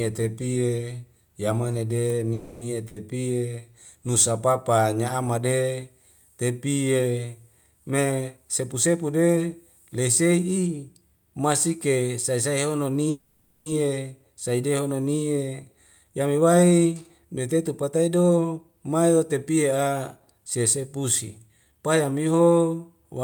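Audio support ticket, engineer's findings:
Held, fading buzz or hiss at 2.33–2.75 s and 13.10–13.68 s, then speech resumes where it stopped, nothing lost. Call audio freeze, likely delayed packets draining the jitter buffer, concealed for 280 ms and 560 ms.

Short fading fill at 2.88–2.98 s, speech jumps ahead. Burst of packet loss: 80 ms of packets lost or late, concealed then dropped.

Hurried speech, pitch unchanged, at 7.92–9.38 s (112% speed) and 15.77–22.41 s (109%). Jitter buffer speed-up trimming pitch periods, roughly a fifth of a second and half a second removed.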